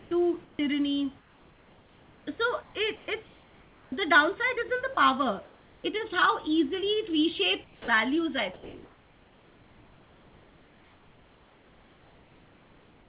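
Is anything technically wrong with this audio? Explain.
Yes. The audio shows four kinds of voice-detector fault, all consistent with discontinuous transmission feeding comfort noise to the receiver. The call path itself can be heard as band-limited, with nothing above 4 kHz, which fits a narrowband telephone codec such as G.711.

Sound chopped by the voice detector, 0.0 to 0.59 s. Over this opening stretch about 260 ms in total is replaced rather than passed through. The likely cause is the sender's detector toggling between sending and muting several times, with each muted gap filled by synthetic noise. The start of the clip sounds choppy, and the background flickers between the real room sound and a smoother generated hiss.

Comfort noise in place of the background at 1.19 to 3.92 s, 4.94 to 5.84 s (ending just before "is how"), 7.64 to 7.88 s, and 8.54 s to the end. Here the sender likely stopped transmitting when it judged there was only background, and the receiver synthesised noise of roughly matching spectrum. 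The real room noise, normally about 30 dB below the speech, turns into a flat, featureless hiss. The hiss is about 5 dB quieter at 7.64 s and about 2 dB quieter in the final stretch.

Onset clipped by the voice detector at 3.87 s (50 ms lost) and 7.8 s (80 ms lost). In both places the detector was likely slow to recognise that sound had resumed, so the first fraction of the onset was never sent and comfort noise covered it. The sound therefore starts abruptly, with its soft attack missing, and emerges directly out of the synthetic hiss.

Sound dropped by the voice detector, 4.94 to 4.97 s. About 20 ms of actual sound disappears inside a 30 ms gap. The likely cause is the detector mistaking a quiet tail for background and cutting transmission. The sound briefly gives way to steady noise before the next stretch of comfort noise takes over.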